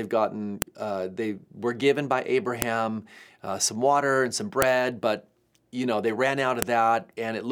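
At 0.62, 2.62, 4.62 and 6.62 s there's a sharp, loud snap cutting through the speech, every 2 seconds like clockwork. That's a file header played as audio: the speech was joined in 2-second pieces, and each piece's header bytes got decoded as samples.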